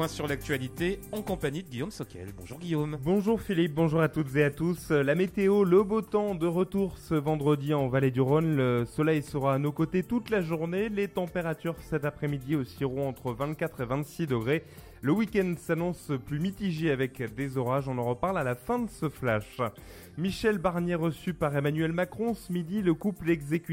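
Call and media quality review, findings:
No audible transport, capture or playback faults were found anywhere in the recording.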